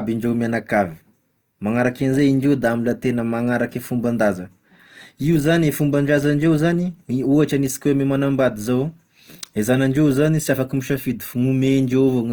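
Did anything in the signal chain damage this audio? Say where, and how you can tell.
Yes. Opus compression throughout the speech, most likely at the codec stage: the voice sounds rough and grainy rather than swirly, with plainly audible damage while the band still reaches about 20.1 kHz. That fits CELT mode near 24 kbps, filling starved bands with folded or noise-like content.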